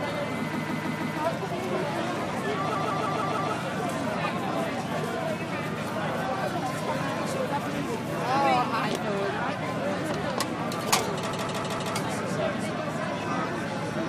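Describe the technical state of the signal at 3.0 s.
At 3.0 s you're inside a repeated-frames stutter running from 2.75 to 3.53 s: a 157 ms chunk of compressed audio, which fits a short run of codec frames, gets replayed five extra times, looping audibly and stretching things by about 0.78 s.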